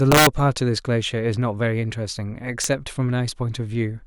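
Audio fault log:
0.12–0.27 s and 2.64 s, integer overflow: peaks overshot the largest integer by about 4 dB, then about 1 dB, and wrapped to the opposite sign instead of limiting. Each flip across the full range gives a violent crack, sharper than clipping.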